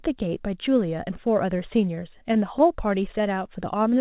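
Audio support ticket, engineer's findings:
Scattered short gaps, 1.73 to 2.62 s. Brief ticks and small smears in the speech, around seven of them. Receiver concealment. Lost or late packets, each hole patched by extending the preceding sound. Gaps are short, longest roughly 15 ms, about 50 ms concealed in total.

Jitter buffer slow-down, 3.18 to 3.98 s. Speech drawn out, pitch unchanged, playing at 95% speed. Jitter buffer stretching. Single pitch periods and pause fragments repeated to rebuild reserve, adding 48 ms. Band-limited to 4 kHz throughout, consistent with G.711 mu-law.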